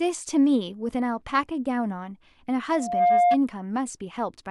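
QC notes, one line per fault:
2.72 to 3.38 s, loudspeaker feedback squeal. A pure tone near 705 Hz rises out of the speech and swells over roughly a third of a second. It then sits well above the speech, by roughly 10 dB, until it stops. The microphone is hearing the loudspeaker it drives. At 705 Hz the loop gain tops one, so that frequency feeds itself and grows. That is why one steady pitch howls over everything else.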